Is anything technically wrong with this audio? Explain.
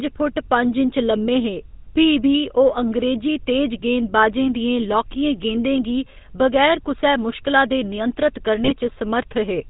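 Yes, two things. The whole clip has gone through the GSM full-rate codec, and near the end there's a short burst of GSM bit errors.

The codec damage runs from start to finish and it's plainly audible. The first GSM codec rebuilds the voice from a vocal-tract filter driven by a coarse, regularly spaced pulse train, with most of the excitation detail thrown away. The result is that buzzy, gravelly roughness, and the quality fits a 13 kbps full-rate stream. The band is capped at 4 kHz, so the speech sounds dull and telephone-like.

The bit errors hit from 8.64 to 8.72 s, right after "कुसै मुश्कला दे नियंत्रत". On a weak link some bits get flipped before they reach the decoder. A corrupted filter, pitch or gain parameter then makes the decoder produce a wrong spectrum or level for a few frames. Here that comes out as a brief squawky, gargling break of about 80 ms. The damage points to roughly 2% of bits flipped.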